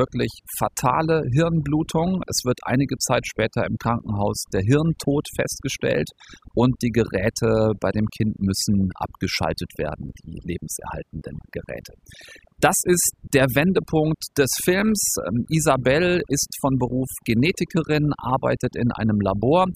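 Across the whole recording the speech carries overdone noise removal: a noise reducer set far too aggressively strips away any frequency band that sits near its estimate of the background noise, taking the quieter parts of the voice with it. The gaps fall to near silence dotted with twinkling specks. Unlike a noise gate, which mutes everything at once, this removes isolated bands independently.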